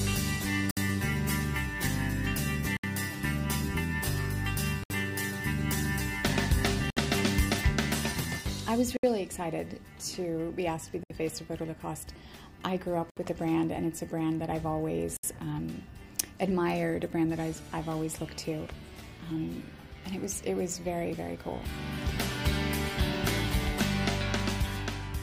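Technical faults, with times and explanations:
0.71, 2.77, 4.84, 6.90, 8.97, 11.03, 13.10 and 15.17 s, gap at a join of encoded pieces: the sound drops out in a gap about 59 ms long at the first point and 67 ms at the rest, then resumes where it left off. Each 2 s stretch was encoded on its own and butted together untrimmed, so every join keeps the encoder's start-up silence and last-frame padding. The codec smears the edges of each hole, so the fully silent part is shorter than the gap.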